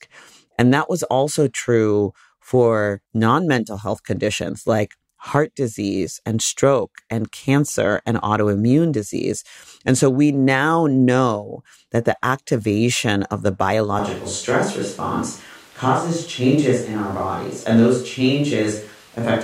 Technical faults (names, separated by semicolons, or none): switch to a distant microphone